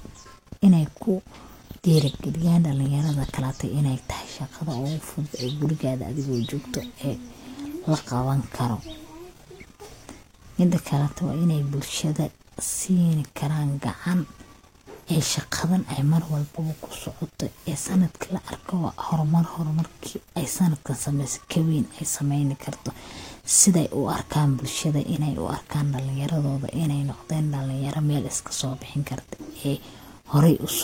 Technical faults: AAC frame loss with concealment

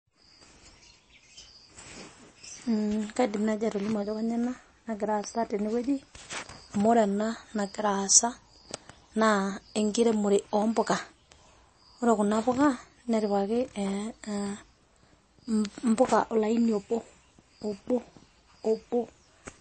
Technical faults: MP3 compression

